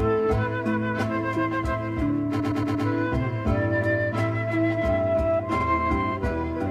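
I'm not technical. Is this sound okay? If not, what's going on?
No. Throughout, the sound is hollow, as if heard through a tube. That's comb filtering from a channel delay: one side arrives about 3 ms late, and when the two sides combine, matching parts cancel at regularly spaced pitches, starting low around 150 Hz.

There are also two stutters from repeated frames. From 2.39 to 2.85 s, a short slice of about 0.12 s plays four extra times, adding almost half a second. At 5.59 to 5.64 s, a 46 ms slice repeats once. The same piece of stored audio was played again.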